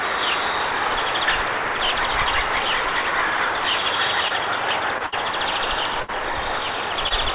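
Audio carried over a call link, band-limited to nothing above 4 kHz in the way that points to a 64 kbps G.711 mu-law codec, has three brief smears or wobbles at 4.28–4.32, 4.98–5.02 and 7.08–7.12 s. These are short concealed packet loss: roughly 20 ms each time never arrived, and the receiver bridged the hole by extending the preceding sound before rejoining the real signal. At 5.06–5.14 and 6.02–6.10 s a longer held buzz or fading hiss appears, then the audio picks up further along. That is a burst of packet loss, about 60 ms gone each time, concealed by stretching and fading the last sound, so that stretch of the original is simply missing.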